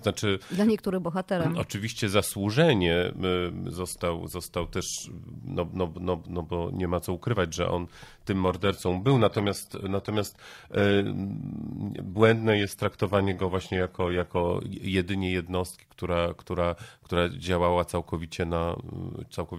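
At 8.48 s the audio quality drops suddenly, with no gap. This is an adaptive stream at a lower bitrate. The connection slowed, so the player switched to a leaner version of the stream. The sound points to a fall from about 96 kbit/s AAC to a low-rate HE-AAC stream near 20 kbit/s. Nothing is left above 14.9 kHz, and codec artefacts rise. At 14.48 s, six seconds later, full quality returns just as abruptly.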